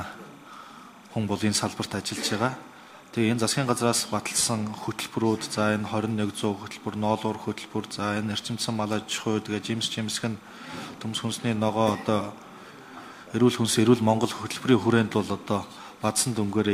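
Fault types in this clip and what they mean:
timecode bleed: Linear timecode leaks in as a steady chirping warble throughout. It switches between tones near 1 and 2 kHz, about 30 dB below the sound.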